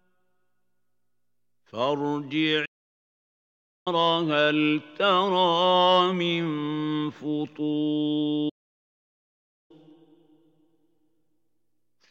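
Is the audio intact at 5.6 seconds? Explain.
Yes, the audio is intact at 5.6 seconds, with no dropout, click, distortion or other fault at that point.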